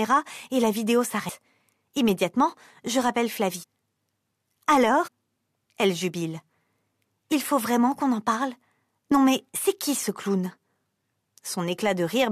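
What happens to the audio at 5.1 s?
At 5.06 to 5.09 s the audio jumps forward: compressed frames skipped. A short run of frames, each about 23.2 ms long (which fits 1024-sample frames at 44.1 kHz), never reaches playback, so roughly 150 ms of material is simply gone. At the join the sound jumps abruptly from one moment to a later one. On a spectrogram, the texture changes abruptly at a vertical seam. The waveform shows a discontinuity.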